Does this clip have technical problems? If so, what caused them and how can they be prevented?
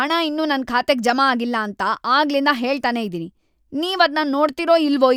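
No, there's nothing technically wrong to point to in this speech clip, so there's nothing to trace back or prevent.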